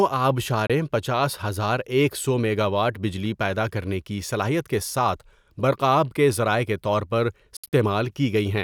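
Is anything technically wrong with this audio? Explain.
Yes. The speech has two likely Bluetooth dropouts. At 0.67 s the sound cuts out for about 27 ms. From 7.57 to 7.73 s it breaks into scattered gaps totalling 120 ms, the longest about 67 ms. Late packets were discarded, so playback skipped ahead. The waveform shows flat holes, and the spectrogram shows blank vertical strips.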